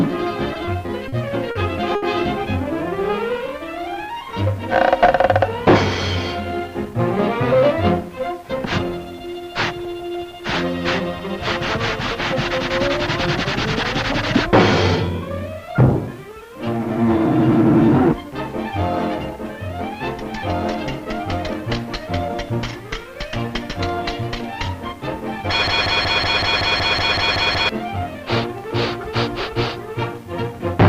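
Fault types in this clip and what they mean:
Repeated stalls (stutter): Packets showed up late, so the jitter buffer kept running dry and the receiver stretched the last sound to cover. Between 0.54 and 2.03 s there are six such holds, about 200 ms in all and none longer than 70 ms. Nothing's lost, but it drags and stutters.
Jitter buffer slow-down: The buffer was getting low, so the receiver padded it by repeating tiny chunks of sound. From 2.65 to 4.13 s the audio runs at 92% speed, about 124 ms longer than it should be, with the pitch unchanged and sounds a bit drawn out.
Jitter buffer speed-up: Here the buffer had too much audio queued, so the receiver trimmed out small slices to catch up. It happens at 6.32–8.17 s (106% speed, roughly 150 ms cut), 13.07–16.08 s, 19.57–21.70 s and 24.93–30.26 s, each at about 101–102%. The pitch stays put but the audio feels hurried in the first stretch.
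Broken-record loop: From 25.68 to 27.69 s a 187 ms fragment plays back to back 11 times, exactly the same each time, and whatever should have played there is gone. The likely cause is the stream stalling and resending the last piece it held.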